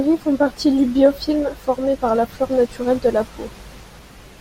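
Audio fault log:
0.96 s to the end: filter restarted on every block. From here the speech carries a steady buzz at 25 Hz. A filter in the chain loses its memory at each block boundary and begins again from silence. Each restart leaves a small transient, and these arrive 25 times a second, which points to blocks of about 40 ms. The ticks fuse into a low buzz. It grows louder and quieter with the speech level.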